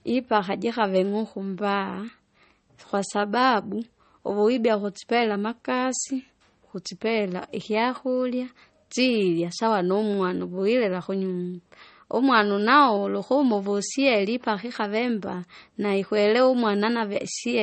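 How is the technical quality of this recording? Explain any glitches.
The quality is limited by the codec history more than anything else. Throughout, the speech has nothing above about 8.3 kHz and carries the swirly, smeared texture of heavy MP3 coding. It's likely low-bitrate audio saved at a high bitrate: a roughly 32 kbit/s MP3 re-encoded much higher, which can't restore the lost top end or undo the artefacts.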